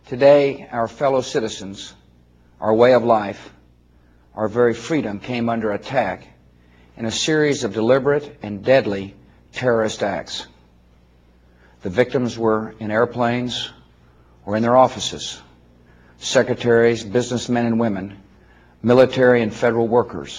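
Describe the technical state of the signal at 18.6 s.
At 18.6 s the signal carries clock slip clicks, which run from 0.10 s to 20.38 s. The likely cause is two devices on unsynchronised clocks differing by roughly a thousand parts per million, so a single sample is dropped or repeated about every 20 ms. That rate gives a faint, fast rattle over louder material. A spectrogram would show thin, evenly spaced vertical broadband lines, and the waveform would show tiny one-sample discontinuities at that interval.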